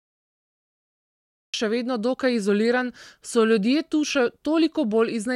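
For the first 1.54 s the speech clip holds pure digital silence, then the audio jumps in mid-sound just before "še vedno dokaj izoliran". This is a cut-off start: capture began late, so the opening arrives already at full level with no attack, fade or room tone leading in. Unlike a dropout, nothing was lost between sounds, and unlike a slow fade-in, the level is full from the very first sample.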